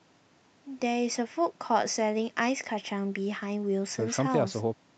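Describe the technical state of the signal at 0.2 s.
At 0.2 s the speech is intact, with no fault present, only the ordinary coding texture and the top end stopping near 8 kHz that the call path leaves behind.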